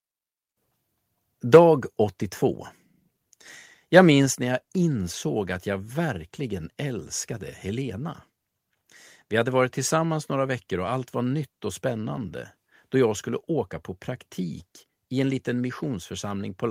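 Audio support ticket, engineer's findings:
Microphone volume stepped down at 4.26 s, just before "när jag insåg att". Speech and room tone both drop by about 4 dB in one hard step, no ramp. Likely the call app's input-level control catching a hot or clipping mic and pulling device gain down. Worth checking the mic gain settings on that end.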